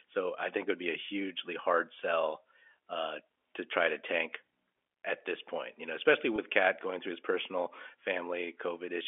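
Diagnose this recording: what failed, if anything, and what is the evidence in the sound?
Packet loss with pitch repetition at the network stage: about 20 ms of audio went missing, and the receiver filled the gap by repeating the last pitch period. Just after "point you know especially", from 6.36 to 6.38 s, the speech holds a brief, slightly buzzy sustained tone within the 300 Hz to 3.4 kHz G.711 telephone band.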